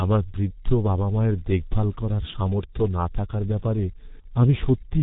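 From start to finish the speech carries heavy G.723.1 codec damage. Nothing gets through above about 3.8 kHz, so the top end is gone and everything sounds muffled. The codec works in 30 ms frames and updates its model of the voice slowly, which leaves the voice hoarse and smears consonants together. The degree of damage fits a bitrate of about 6 kbit/s, the low end of early internet telephony.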